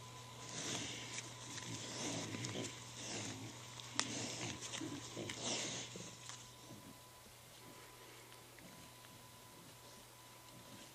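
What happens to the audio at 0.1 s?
At 0.1 s, computer activity noise is already present, and it runs throughout the clip. Busy processing, graphics or mouse movement disturbs the shared ground of the audio circuit. The result is a buzzing, chirping layer pulsing around 1 kHz, roughly 20 dB below the sound.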